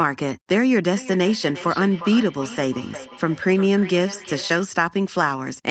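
From 0.96 s to 4.73 s the speech carries a feedback echo between two devices: a second device replays this microphone's signal, which is picked up again, so each word returns roughly every 0.4 s, thinner and ringing, peaking about 15 dB below the speech.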